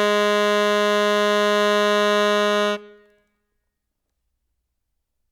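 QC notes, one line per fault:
No faults were found in this music clip. Nothing here calls for a QC entry.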